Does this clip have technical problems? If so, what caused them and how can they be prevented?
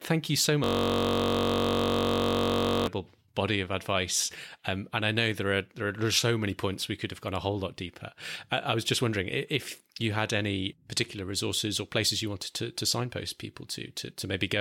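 Yes. A system hang loop runs from 0.64 to 2.87 s, between "you so" and "body of advice". One 21.33 ms slice, which fits a 1024-sample buffer, repeats about a hundred times, giving a steady 46.9 Hz buzz. The waveform shows identical repeating cycles, and the spectrogram shows evenly spaced horizontal harmonic lines. Prevent it by keeping the audio thread at high priority and adding a watchdog that mutes output when the buffer stops being refilled.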